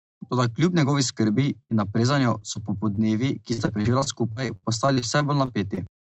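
Speech over a call path whose audio tops out around 8 kHz, the way a wideband Opus stream does. Four spots of short concealed packet loss, at 1.33–1.37, 2.39–2.43, 2.53–2.57 and 2.95–2.99 s, sound like quick smears or wobbles. Each time about 20 ms of audio never arrived in time, and the receiver papered over the hole by extending the last sound before blending back in. At 1.63–1.71 s there's a proper burst of packet loss. Around 60 ms went missing in a row, so the decoder stretched the last sound into a held buzz or hiss that dies away, then jumped ahead with that chunk simply gone. The rough stretch runs from 3.53 to 5.79 s, where repeated packet loss gives that choppy, robotic sound. There are 14 gaps, the longest about 62 ms, each patched just before the next one hits, so roughly a fifth of that stretch is made-up fill rather than real audio.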